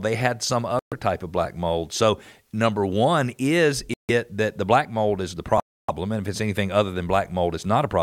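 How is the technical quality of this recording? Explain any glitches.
The speech drops out three times: around 0.79 to 0.93 s, 3.94 to 4.10 s, and 5.60 to 5.90 s, with silences of 126, 153 and 287 ms. Each is likely a Bluetooth stall, where interference delays packets and the headphone buffer runs dry, so the sound cuts out and then resumes.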